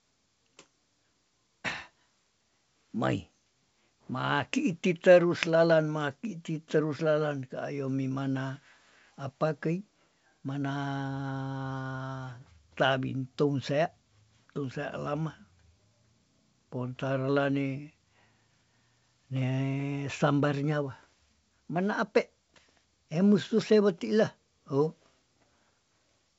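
Nothing stood out on listening to this speech clip, which carries the band-limited sound of G.722 wideband telephone coding, consistent with 64 kbit/s, with nothing heard above about 7.7 kHz.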